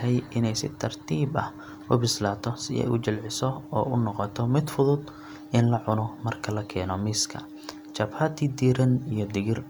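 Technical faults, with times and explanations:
No technical faults are audible anywhere in this speech recording.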